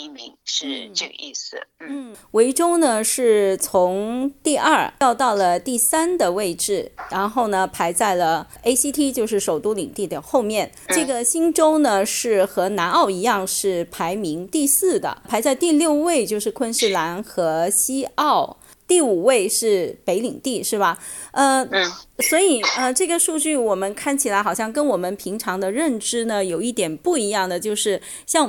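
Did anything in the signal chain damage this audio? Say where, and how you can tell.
No, nothing along the way seems to have harmed this one; there's no point in the audio where any stage of the chain gives itself away.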